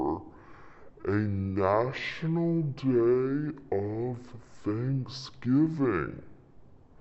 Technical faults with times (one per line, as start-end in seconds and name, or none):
0.00-7.01 stereo read as mono